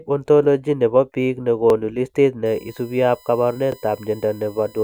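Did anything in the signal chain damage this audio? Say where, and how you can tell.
Yes. Overlapping chunks at the buffer stage: at 1.70 s and 3.72 s a 21.33 ms slice repeats as a stutter, every 2.0 s where chunk joins overlap.

USB whine in the analogue power or ground wiring: from 2.46 s to the end there's a steady 1 kHz-based whine, loudest at its 20 kHz harmonic, around 30 dB below the signal.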